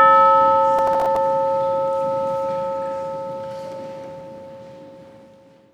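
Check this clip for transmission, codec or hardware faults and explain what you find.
One hardware-side fault is present: processor overload crackle from 0.79 to 1.16 s. The processor repeatedly misses buffer deadlines, and each missed buffer of a few milliseconds drops to silence. The roughly ten hard-edged gaps sound like gritty crackle, appearing as flat dropouts on the waveform and thin broadband vertical streaks on a spectrogram.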